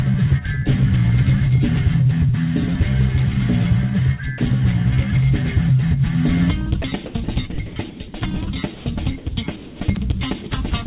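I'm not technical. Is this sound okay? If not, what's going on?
No, there are four kinds of problem, all from about 4.4 s onward.

Sound dropped by the voice detector: at 4.38 s, from 8.74 to 8.86 s, from 9.18 to 9.26 s, and at 10.44 s. The sending side likely has an automatic switch that decides when someone is making sound and stops transmitting when it thinks there's nothing worth sending. Here it seems to have misjudged quiet moments, so short bits of sound vanish and a plain, even hiss fills the gap for a moment before the real sound returns.

Sound chopped by the voice detector: from 6.82 to 8.0 s. The same switch likely flipped on and off several times over this stretch instead of once. Small pieces of sound, less than half a second in total, were swapped for filler hiss, so the audio comes out choppy.

Comfort noise in place of the background: from 9.56 to 9.8 s. With nothing being sent, the receiving side likely made up a smooth hiss so the line wouldn't go dead. 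For about a quarter of a second the natural background, with all its small details, is replaced by that flat, featureless noise, at almost the same loudness.

Unstable filter: from 9.92 to 9.97 s. A piece of sound-processing maths went out of control and fed on itself. In about 40 ms a high-pitched beep swells up very loud, distorts, and then the audio cuts out completely for a few thousandths of a second while the processing resets.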